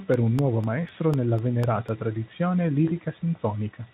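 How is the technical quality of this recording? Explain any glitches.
Two kinds of glitch stand out in this speech recording: a run of regular clicks in the first half and one brief smeared moment near the end.

Periodic USB or driver dropouts run from 0.14 to 1.89 s, repeating every 0.25 s, about seven in all. A background task stalls the audio driver or USB bus, and each stall drops roughly half a millisecond of audio to silence, heard as evenly spaced ticks over the speech.

VoIP packet loss concealed by the speech codec occurs at 2.85 to 2.92 s. About 20 ms of data went missing, which fits a single lost frame. The decoder filled the gap by extending the last pitch and filter state at falling gain, producing a short, fading smear that lingers after packets resume.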